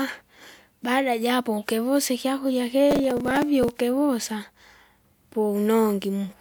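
Speech, in which the processor falls behind and misses many short buffers of around 5 ms again and again, each repeating old audio, causing processor overload crackle from 2.91 to 3.69 s.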